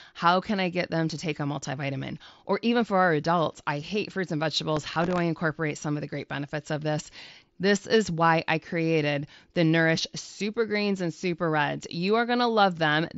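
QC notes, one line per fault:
4.77–5.18 s, processor overload crackle. A gritty burst of crackle tears across the speech for about 0.4 s. Many tiny buffers missed their deadlines in a row. Each gap was filled with stale audio, joined with hard edges. The fine grain fits buffers of roughly 1.5 ms.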